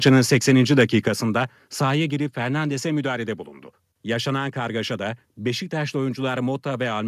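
It's a speech clip, and the opening stretch from 0.05 to 0.83 s has that harsh, crackly edge on the loudest syllables that you get with microphone overload. The peaks are running about 4 dB past the ceiling and getting their tops sheared off, with roughly one percent of the samples flattened. The likely cause is the mic input gain being set too hot, so the converter simply runs out of headroom on the biggest moments.

You can also hear the microphone volume stepped down twice, each time as a sudden drop in the whole level, voice and background together. The first is a small dip of about 2 dB at 0.09 s, right as the distortion kicks in. The second is a bigger cut of about 6 dB at 1.08 s, just after the clipped section ends. That pattern likely comes from the call software's automatic gain control reacting to the overload and pulling the device's input level down in discrete jumps rather than smoothly.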